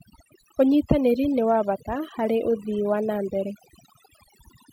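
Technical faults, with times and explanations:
Throughout: overdone noise removal. The noise reducer was pushed so hard that any frequency band sitting near its estimate of the noise is pulled far down or shut off, taking the quieter parts of the speech along with it. The background drops and breaks up into twinkling specks. A noise gate would mute everything at once; here the specks flicker band by band and the losses follow the speech itself.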